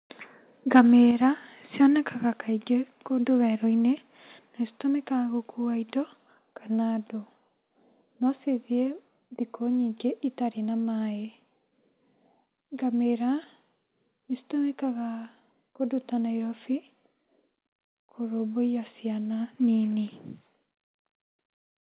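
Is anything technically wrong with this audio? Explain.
Yes. From 0.75 to 0.80 s the loudest peak turns harsh and crackly, about 4 dB over full scale with roughly 7 percent of samples flattened. This is microphone overload, likely from input gain set too high for the converter.

The level then drops abruptly, by about 5 dB at 1.11 s and about 2 dB more at 2.13 s. This is the microphone volume being stepped down, likely by the call software reacting to that clipped peak. Sound and background fall together.

Nothing reaches above 4 kHz, which fits the narrowband G.711 call path it travelled through.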